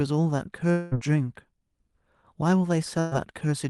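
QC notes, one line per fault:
0.71–0.94 s, long network dropout (likely cause): about 200 ms of sound is lost and replaced by a fading continuation of the preceding sound, longer than a short packet-loss burst.
2.99–3.14 s, burst of packet loss: about 120 ms goes missing, filled by a held, decaying continuation that is briefer than a dropout. Audio resumes further on, with the gap skipped.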